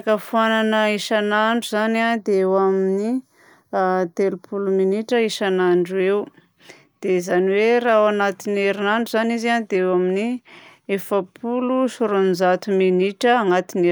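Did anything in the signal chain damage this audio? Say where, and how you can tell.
Yes. From 2.18 to 5.12 s the speech turns hollow and phasey. That is channel delay (comb filtering): one channel lags the other by about 0.2 ms before the mono sum, cutting fixed notches starting near 3 kHz. Unlike a low-pass, the highs return between evenly spaced notches.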